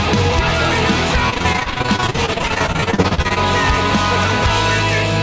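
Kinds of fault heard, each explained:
Repeated packet loss (robotic sound): from 1.30 to 3.38 s, dozens of sub-40 ms holes are patched with repeated sound, a rapid chop rather than one single dropout.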